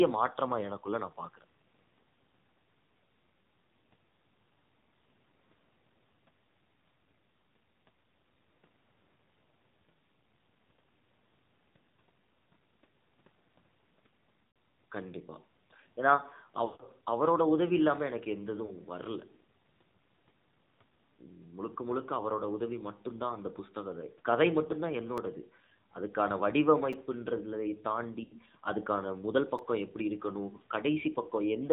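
AMR narrowband mobile codec runs through the whole speech clip. Its sound fits AMR-NB at 7.4 kbps, with clearly audible damage. The codec samples at 8 kHz and rebuilds the voice from a vocal-tract model excited by a few pulses per 5 ms subframe, so nothing above 4 kHz survives. At this low bitrate the pulse coding is coarse, and the voice comes out muffled, buzzy and noticeably synthetic.

Lost AMR speech frames first appear from 14.48 to 14.56 s (80 ms), then from 16.66 to 16.83 s (140 ms) and from 18.66 to 18.73 s (40 ms). In each gap the decoder received frames that failed their checksum, so it kept replaying the last good pitch and filter settings at falling gain. The short 40 ms loss is a brief dip or warble. The 140 ms run stretches out and sinks toward silence before the voice returns weak or rough.

Repeated buffer faults occur at 25.17 s and at 26.93 s. Audio did not arrive in time, so the output replayed its last block, which lasts 5.33 ms and fits a 256-sample buffer. 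The block plays twice at 25.17 s and three times at 26.93 s. Each repeat ends in a hard join, and with such a tiny block the result is a click or short buzz rather than a stutter. Only a few milliseconds of new sound are lost each time.

Another lost-frame run covers 28.24 to 28.36 s, with about 80 ms of concealed audio, and gives the same smeared, fading dip. A final repeated buffer at 29.58 s plays the 5.33 ms block once more, which is heard as a brief click or buzz.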